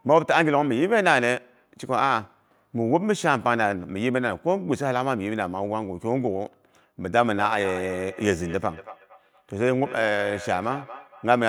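From 7.23 s onward, feedback echo between two devices loops the sound back roughly every fifth of a second, repeating and thinning.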